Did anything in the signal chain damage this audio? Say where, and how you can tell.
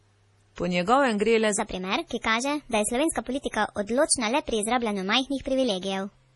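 Yes. The clip was most likely passed through an MP3 encoder at the codec stage, and the damage is heavy throughout. Nothing remains above 11.5 kHz, which is the encoder's fixed treble cut. The sound is watery and swirly, with weak frequency lines flickering in and out from frame to frame as the encoder zeroes them. The s sounds chirp metallically and onsets smear, which fits a low bitrate of around 32 kbps.

There is also a section at the wrong speed, most likely introduced at the editing or playback stage where part of the audio was run against the wrong clock. It begins at 1.59 s, right after "njegovem gre le", and lasts to the end of the clip. From that point the speech plays 1.29 times too fast, so pitch and tempo rise together by roughly four semitones. The voice turns abruptly higher and more hurried.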